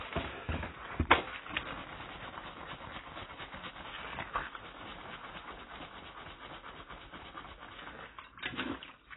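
From start to finish the sound is dull and smeared, with nothing above 3.9 kHz and a watery, warbling texture on sustained parts. This is likely AAC compression, from AAC-LC coding squeezed so hard that the encoder discarded the upper band and coarsely quantised what remained; the heavy damage fits a bitrate around 16 kbps. On a spectrogram, energy stops at a flat ceiling near 3.9 kHz, with patchy holes and blocky smearing below it.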